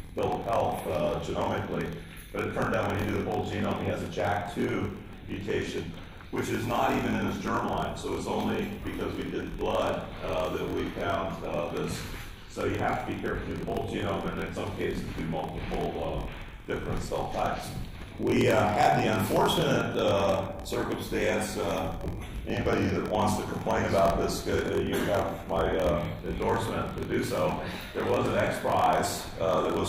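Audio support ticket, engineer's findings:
Steady buzz at 43.1 Hz throughout, with playback slowed to 0.938x at normal pitch. Block size mismatch (padded) between adjacent buffer stages. The consumer reads blocks that fit 1024 samples, and the producer appears to write about 960. The shortfall is zero-filled, so a gap recurs every block.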